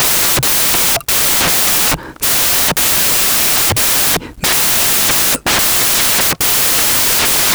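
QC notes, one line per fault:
Throughout: samples built from the wrong bytes. The sample bytes are put together wrongly, so the low bits dominate each value and the speech becomes loud, harsh broadband noise, close to white on the loud sounds.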